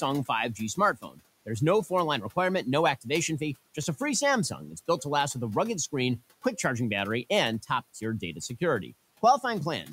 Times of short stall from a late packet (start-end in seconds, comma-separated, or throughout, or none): none